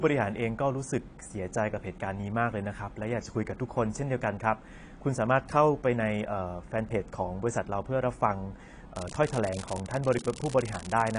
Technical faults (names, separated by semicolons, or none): AAC compression; unreliable data bit